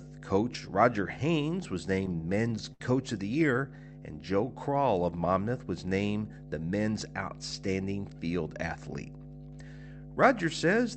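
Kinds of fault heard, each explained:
Mains hum: A steady 50 Hz tone, picked up from the power supply through a ground loop or nearby transformer, runs under the speech for the whole clip. It is fairly strong, roughly 15 dB below the speech. On a spectrogram it is an unbroken horizontal line at 50 Hz, well below the speech energy that extends up to the 8 kHz ceiling of the call codec. On the waveform it is a slow ripple that stays visible through pauses.
Repeated stalls (stutter): From 1.95 to 2.81 s, just before "of the", the stream ran dry eight times. Each time the receiver stretched the last sound to cover the wait. These gaps total 136 ms, about 16% of that stretch, and the longest is 70 ms. No speech is lost, but the delivery drags and judders. On a spectrogram, smeared, repeated frames break the normal flow of syllables. The waveform shows short, looped-looking segments with softened, faded edges.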